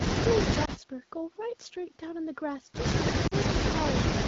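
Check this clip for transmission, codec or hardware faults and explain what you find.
Two short dropouts are audible in this speech clip, both from lost AMR speech frames.

Lost AMR speech frames at 0.65–0.70 s and 3.27–3.34 s: frames failed their error check, so the decoder repeated the last good pitch and vocal tract settings at reduced gain. The first is a brief dip, consistent with one 20 ms frame. The second lasts longer and drops to near silence, fitting two frames, about 40 ms. Around both, the AMR wideband coding stays clear, which suggests a rate near 12.65 kbit/s.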